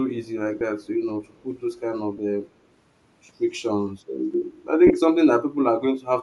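Speech throughout carries a breathy, grainy edge, with the top of the band thinned and partly replaced by hiss. This is most likely Bluetooth LC3 compression, and the damage fits a stream of about 48 kbps in 10 ms frames. On a spectrogram the upper region looks patchy and noise-filled rather than harmonic. Three brief dropouts show lost LE Audio frames, at 0.59 to 0.61 s (20 ms), 2.17 to 2.19 s (20 ms) and 4.87 to 4.91 s (30 ms), each roughly two or three frames' worth. The decoder repeats the last spectrum with scrambled phase, so the sound smears into a short noisy burr instead of going silent. A waveform shows a small stretch of noise-like fill in place of the periodic cycles, and a spectrogram shows a blurred block where the harmonics briefly vanish. An echo leak also appears, at 0.83 to 0.87 s and again from 1.25 to 1.43 s. A very faint copy of the speech returns about 236 ms late, roughly 40 dB below the direct sound, most plausibly from a far-end loudspeaker whose echo canceller let some pickup through. 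On a spectrogram it appears as weak, washed-out traces of earlier harmonic patterns, offset 236 ms to the right.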